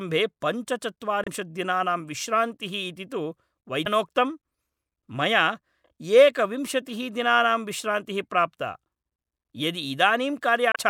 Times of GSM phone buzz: none

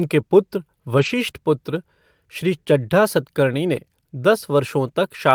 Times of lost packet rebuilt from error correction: 0.97-1.07, 3.75-3.77

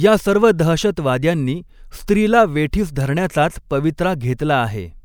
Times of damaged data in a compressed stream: none

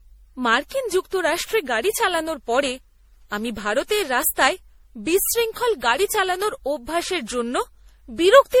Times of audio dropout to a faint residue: none

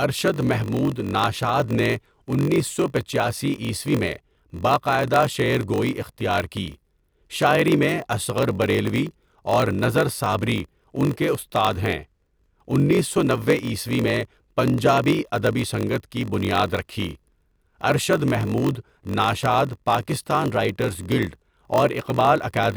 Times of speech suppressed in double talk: none

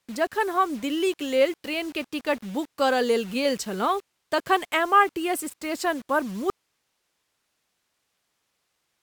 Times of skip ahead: none

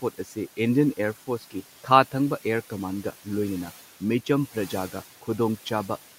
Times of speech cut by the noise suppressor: 0.02-0.37, 1.27-1.63

